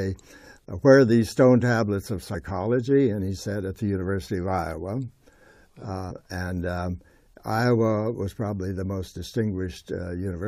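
Damaged data in the compressed stream makes the decoder misread the frames at two points, lose sync and hunt for the next valid frame header. Each time, the audio breaks into a brief glitch. The first is at 2.33 s and lasts only about 14 milliseconds; the second runs from about 6.10 to 6.12 s. Both are isolated and short.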